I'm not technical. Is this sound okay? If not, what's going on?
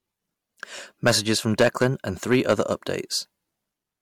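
No. At 0.78 to 0.81 seconds there is damaged data in a compressed stream. A small piece of the stored file is corrupted, so the player stumbles briefly. You hear a short chirp or blip, and the speech may skip slightly ahead.

There is also hard clipping from 1.06 to 1.86 seconds and again from 2.31 to 2.73 seconds. The speech got louder than the recording could hold, so its peaks were chopped flat. That gives a harsh, crackly fuzz on the loud parts.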